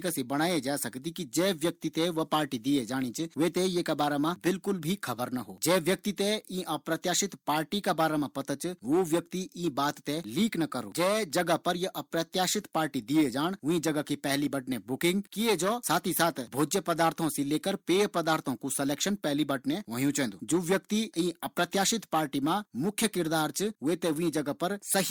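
A speech recording, and nothing in it is technically wrong.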